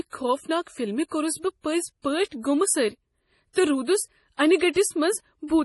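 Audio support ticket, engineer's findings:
Speech throughout, heavy damage: treble gone above 11.5 kHz, watery, swirly texture, metallic chirps on s sounds, smeared onsets. Likely MP3 compression at a starved bitrate, which fits roughly 32 kbps: encoder cuts high band, weak frequency lines toggle between frames. Unlike a plain low-pass or bandwidth limit, which only dulls, the swirl and chirping point to a codec.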